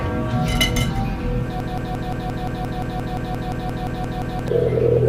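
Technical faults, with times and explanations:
1.60–4.48 s, broken-record loop: a fragment of about 174 ms repeats exactly, back to back, 17 times, so the sound stutters in a rigid mechanical rhythm for nearly three seconds instead of moving forward. The likely cause is a player, encoder or stream that stalled and kept re-sending the last piece it held in memory. Whatever should have played during that span is missing, and normal audio resumes only at 4.48 s.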